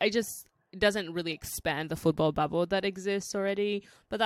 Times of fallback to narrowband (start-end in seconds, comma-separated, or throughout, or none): none